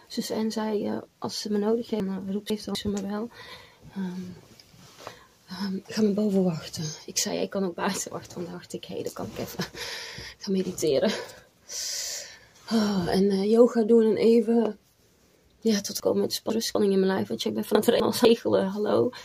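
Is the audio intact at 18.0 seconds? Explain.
No. Between 17.75 and 18.25 s, a 250 ms block of audio was delivered one chunk late, so chunks out of order play with the later block first. Nothing is missing, but the swap creates hard joins that sound like a brief jumbled stutter.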